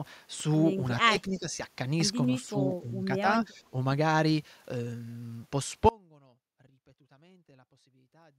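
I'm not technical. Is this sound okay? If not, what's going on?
No, it isn't quite okay. Three times the voice briefly sinks: from 1.04 to 1.48 s, from 2.8 to 3.24 s, and from 3.48 to 3.75 s. The drops are short. This looks like speech suppressed in double talk. The likely cause is an echo canceller that heard the other side talking at the same moment, mistook this voice for echo, and turned it down.

At 5.89 s the voice cuts out abruptly and does not come back before the end. What remains is only a faint trace of sound, far quieter than the speech. It isn't a natural pause or a fade. It is an audio dropout to a faint residue, meaning the main signal was likely lost while the line itself stayed open.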